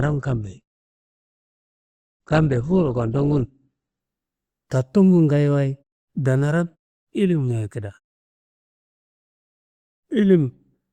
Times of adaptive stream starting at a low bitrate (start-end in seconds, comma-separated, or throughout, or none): 0.00-4.00